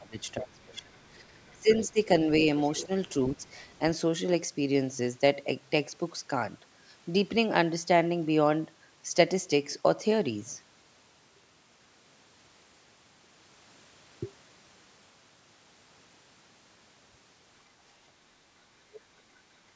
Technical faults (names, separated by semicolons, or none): speech suppressed in double talk; other side's voice leaking through